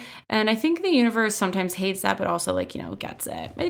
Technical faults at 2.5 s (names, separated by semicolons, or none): none